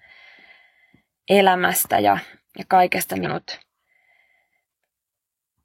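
A speech clip with one abrupt jump forward: just after "elämästä ja ja kaikesta", between about 3.21 and 3.27 s, the flow of the sentence breaks with a short blip, and the talk resumes further on as though a stretch had been cut out. That discontinuity is the sound of a stream segment skipped, likely caused by one chunk of a segmented stream failing to load, so the player carried on from the following chunk and the missing portion never reached the output.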